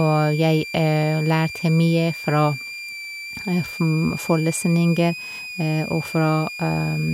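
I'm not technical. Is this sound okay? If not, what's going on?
No. A switching supply whistle runs throughout the speech: a thin, high tone between about 2.3 and 2.5 kHz, fairly noticeable under the voice. A switching power supply is whistling at a pitch you can hear, and the recording picked it up.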